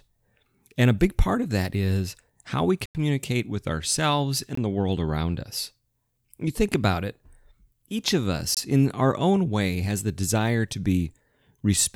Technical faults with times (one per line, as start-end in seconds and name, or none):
2.86-2.95 block of digital silence
4.55-4.57 block of digital silence
8.54-8.57 block of digital silence